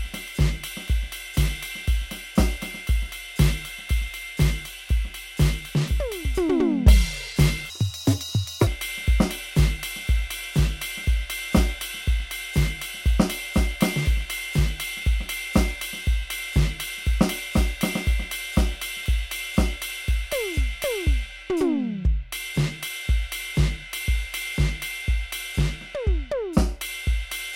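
A section at the wrong speed runs from 7.7 to 8.67 s, where the music suddenly plays at 1.84 times its recorded rate and jumps up by roughly ten semitones, sounding hurried and shrill, likely because that stretch was clocked at the wrong rate during editing or playback.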